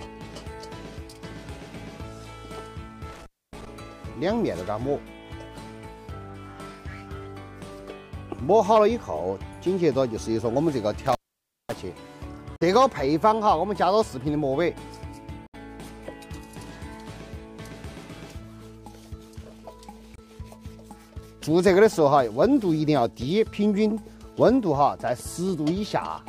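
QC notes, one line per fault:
3.12–3.67 s and 11.06–11.78 s, intermittent contact: the sound drops out with crackle at each edge as the connection breaks and remakes, and only faint hiss gets through while the line is open. The first gap is open for about 270 ms, the second for about 545 ms. The scratchy edges and the noise floor in the hole give it away as a physical contact problem rather than a digital one.
12.56–12.62 s, 15.46–15.55 s and 20.16–20.20 s, Bluetooth dropout, likely: short, clean-edged silences of about 46 ms, 70 ms and 23 ms. When the sound comes back, it has moved on as if it kept playing through the gap. Those lengths fit a few lost packets on the wireless link, roughly one to three each time.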